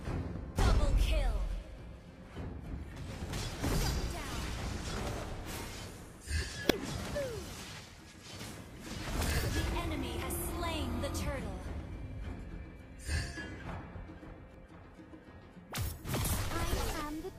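Damaged data in a compressed stream shows up at 0.35 s, 3.22 s, 6.68 to 6.71 s, 10.22 s and 14.54 s. Corrupted bytes make the decoder misread frames and lose sync while it hunts for the next valid header. Each spot is a brief chirp, squawk, click or short hole.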